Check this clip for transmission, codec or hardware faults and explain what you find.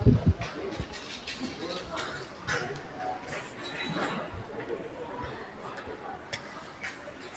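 One fault runs through the whole clip: a noise suppressor applied to sounds it was not built for. A suppressor tuned for speech is treating the steady parts of these everyday sounds, sustained tones, background ambience and decay tails, as noise and pulling them down, while sharp onsets pass. Level swings by around 5 dB as it engages and releases, so the sound pumps and thins between attacks. The call microphone path, which carries nothing above 8 kHz, is heard alongside it.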